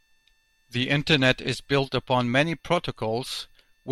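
No technical fault can be heard anywhere in the signal.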